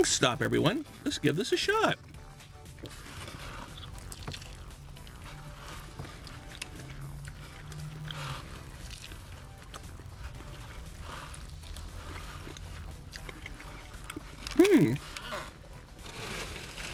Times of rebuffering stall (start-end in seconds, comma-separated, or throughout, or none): none